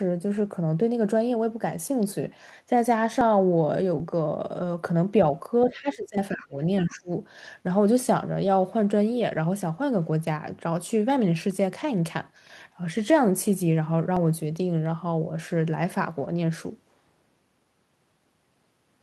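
Speech, with four kinds of fault. Dropped buffers (overruns) are heard as a small forward jump at 3.21, 4.0, 6.18, 9.37 and 14.17 s. The audio skips ahead by roughly 10 to 20 ms each time, with no silence, which is most likely the capture side failing to collect its samples before they were overwritten. On a waveform each appears as an abrupt discontinuity where the two sides are spliced directly. A spectrogram shows a thin vertical broadband line at each point. Lost packets rebuilt from error correction occur at 4.60 to 4.62 s (20 ms), 8.43 to 8.49 s (40 ms), 11.80 to 11.82 s (20 ms) and 16.24 to 16.30 s (40 ms). The lengths fit one or two lost 20 ms packets, filled from the low-bitrate copy carried in the following packet. There is no gap, but the sound turns briefly rough and grainy. A spectrogram shows short patches where the harmonic detail blurs into noise. The other side's voice leaking through is audible from 5.63 to 5.72 s as a faint scrap of a second voice, around 20 dB below the talker. 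It is likely loudspeaker echo that the echo canceller left in the microphone signal. On the spectrogram it shows as a weak, separate harmonic pattern under the main speech. Speech suppressed in double talk follows, from 5.71 to 6.57 s and again from 6.86 to 7.10 s. The echo canceller, likely faced with both sides at once, pulls the talker down by up to about 20 and 25 dB. About 0.7 s and 0.2 s of speech are affected. The waveform envelope sags sharply in those stretches, and the spectrogram fades and thins.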